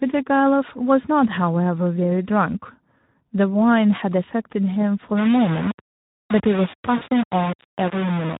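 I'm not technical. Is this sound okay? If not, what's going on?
No, it isn't quite okay. Two problems are audible.

For the whole clip, the speech sounds rough, hoarse and noisy. That is the sound of the Speex codec, an older compression method used in internet calls and game chat. Here it has too little room to describe each moment of speech accurately, so it rebuilds the voice from a simplified model, and the texture comes out grainy and artificial.

At about 6.98 to 7.03 seconds there is a brief glitch where the sound smears into a short buzzy tone or hiss that fades. This is VoIP packet loss concealed by the speech codec. About 40 milliseconds of audio never arrived, so the receiving software filled the hole by stretching out the last bit it had and letting it fade. Because the decoder builds each moment on the one before, the voice stays weak or distorted for a moment after the gap.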